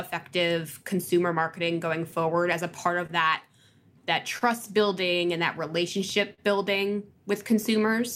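Throughout the speech, there is clock drift between sender and receiver. The sender's clock runs about 3 percent slow, so the jitter buffer keeps draining. The receiver has to stretch and patch the audio. Small timing hiccups recur at uneven intervals across the clip.

From 0.21 to 3.11 s come scattered short gaps. Roughly seven packets arrived too late or not at all. Each hole was filled by continuing the last sound, about 70 ms in total. The longest lasts about 30 ms. Nothing is lost, but brief ticks and smears slip in.

From 0.48 to 7.81 s run repeated timing corrections. The receiver keeps repeating short pieces to match the slower sender. Playback runs at 99 percent speed and adds about a tenth of a second overall. The edits are small and uneven. They sound like a slightly unsteady tempo.

At 4.38 to 4.43 s there is a short stall from a late packet. The buffer ran empty, and the last sound was held for 28 ms until data arrived. 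Delay grows by 28 ms. Nothing is missing, but one sound lingers with a slight buzz or dip.

From 5.68 to 6.40 s come repeated stalls, heard as stutter. The buffer emptied three times. The receiver filled 55 ms in total, which is 8 percent of the stretch, with the longest hold at 43 ms. The speech drags and catches, though nothing drops out.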